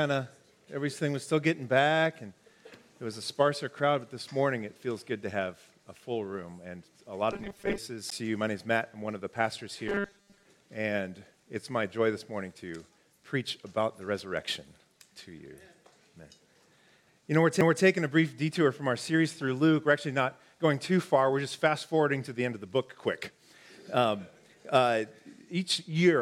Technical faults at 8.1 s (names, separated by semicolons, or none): CD skip